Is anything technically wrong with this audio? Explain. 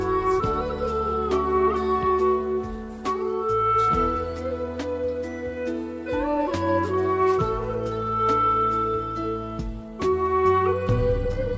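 No, nothing here is technically wrong.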